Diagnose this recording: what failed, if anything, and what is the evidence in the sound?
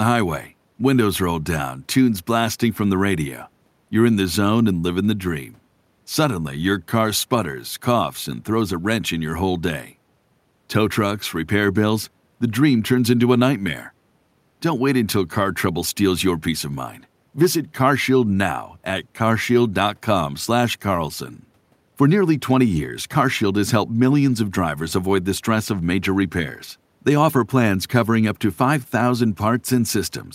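Nothing failed: across the whole speech recording there is no audible fault at any stage between capture and playback.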